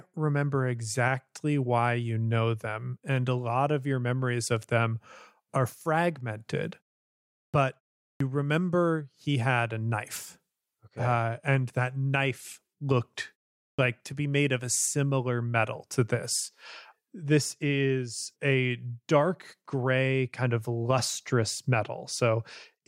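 At 7.42 s, 8.07 s (just before "remember he had a") and 13.67 s (between "and that knife looked" and "like to be made"), speech bursts in abruptly, its onset gone. This is clipped start after a pause: the output device sleeps through short silences and wakes late, swallowing roughly 115 to 135 ms each time.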